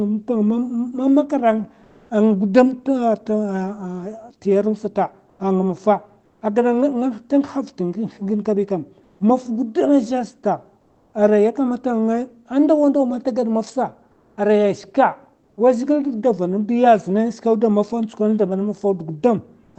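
In short pauses at 1.83–2.09, 5.29–5.39, 6.25–6.41, 9.03–9.19, 10.81–11.13, 14.11–14.37, 15.43–15.57 and 19.63–19.75 s, comfort noise stands in for the real background. The real background becomes a smooth, uniform wash, shifting in level by about 1 to 4 dB, then the real background returns with the speech. The likely cause is Opus DTX halting transmission during silence. A noise gate would leave true silence, not this featureless fill.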